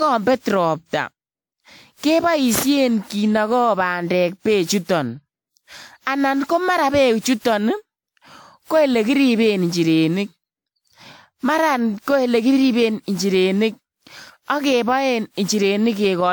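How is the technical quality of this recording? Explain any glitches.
The speech has one persistent fault affecting the whole clip. Generation loss: swirly, hollow, smeared texture with blurred consonant attacks throughout, likely from roughly ten re-encodings with a WMA-type codec. Unlike single low-bitrate coding, bandwidth stays wide, up to 20.1 kHz, yet damage accumulates beyond what that rate explains.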